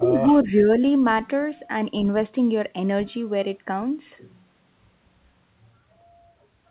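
From 0.0 to 0.71 s the speech dips, by roughly 10 dB at its deepest, for around 0.4 s in total. This is likely speech suppressed in double talk: an echo canceller treating the talker as echo while both sides spoke, and attenuating both. Throughout the clip nothing sounds above 4 kHz, which fits a narrowband telephone codec on the call path.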